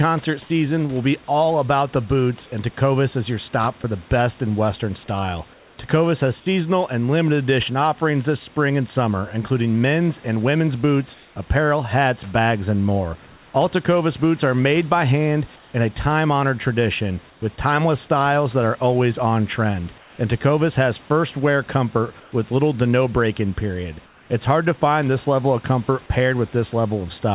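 Comfort noise in place of the background appears at 0.42 to 1.28, 3.82 to 5.78, 11.14 to 13.54, 15.56 to 17.42, 19.98 to 20.18 and 22.2 to 24.3 s. The real room noise turns into a flat, featureless hiss, likely from discontinuous transmission. Near 20 s it is about 2 dB quieter. Sound dropped by the voice detector occurs at 1.26 and 3.82 s. A brief edge of sound is likely judged as background and swapped for steady noise.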